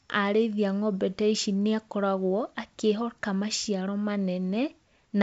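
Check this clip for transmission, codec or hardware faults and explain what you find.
No transmission, codec or hardware faults.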